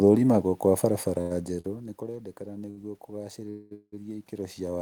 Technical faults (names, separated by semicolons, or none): short stall from a late packet; call audio freeze